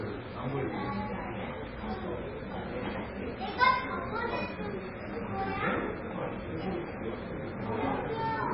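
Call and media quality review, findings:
Treble missing throughout, nothing above 5.6 kHz. Watery, swirling texture, smeared attacks. Likely MP3 compression at a very low bitrate, around 15 kbps. Encoder cuts the top band and drops weak frequency lines frame to frame.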